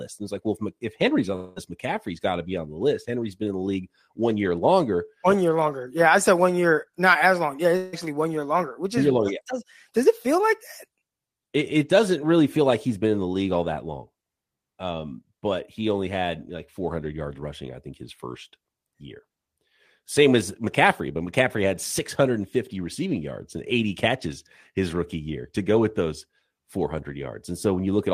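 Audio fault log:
1.35–1.71 s, long network dropout: the speech gives way to a fading buzzy hiss for about 0.2 s, then resumes with roughly 0.2 s gone, likely from lost packets being concealed.
7.77–7.95 s, long network dropout: a shorter fading buzz of about 0.16 s replaces the speech, which returns missing a similar stretch, likely from a network gap.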